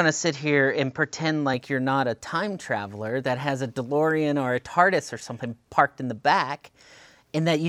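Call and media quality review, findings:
Input switched to a poorer device, likely a headset call profile or other mic, 0.00–1.54 s. Band-limited capture, nothing above 7.4 kHz: speech dull, then clears at 1.54 s. Level steady, faint new noise floor, no gap.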